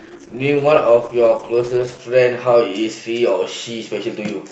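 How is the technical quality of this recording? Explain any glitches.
The recording has one fault, at the start: an adaptive stream starting at a low bitrate. From 0.0 to 2.0 s the speech is thin and dull, with missing treble and stronger codec smearing, which points to a very low-rate Opus stream around 12 kbit/s. The player began on that version to start quickly, then switched up once it had measured the connection. At 2.0 s quality jumps abruptly, with no gap, to a fuller sound consistent with roughly 64 kbit/s.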